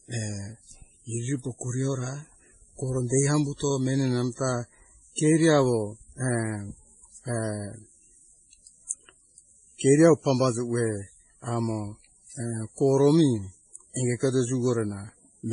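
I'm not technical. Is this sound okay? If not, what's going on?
No. From start to finish the speech has a dull quality, and nothing is heard above about 10.5 kHz, so the crisp top end is missing. This is likely transcoding between lossy codecs: the sound points to a low-quality MP3 that was later re-saved as WMA. The second format wasted effort preserving the first one's damage and added its own, so the two kinds of artefact are heard together.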